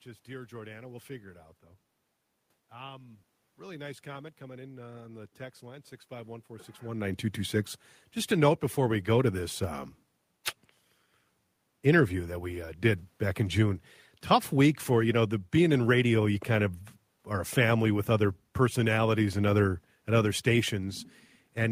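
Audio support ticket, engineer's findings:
No system faults found: the background is room noise picked up at the microphone, and the level shift around 6.5 s is the talker changing distance from the mic, not a signal-path issue.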